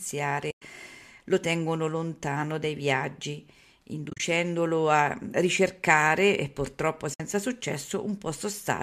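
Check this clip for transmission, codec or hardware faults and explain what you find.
Three short dropouts are audible, all from AAC frame loss with muting. The first, at 0.51 s, silences the sound for 110 ms. The second, at 4.10 s, is a 100 ms stretch broken into several gaps, the longest about 40 ms. The third, at 7.14 s, right after "a ricercare e purtroppo", removes 60 ms.

The decoder zeroes each lost frame's spectrum, and the overlapping windows taper the edges. The result is a soft-edged hole. On a spectrogram each appears as a blank vertical band, and on a waveform as a flat gap with faded edges.

The slight roughness of the low-delay AAC compression likely comes from AAC-ELD, and the gap lengths fit its 10 ms frames.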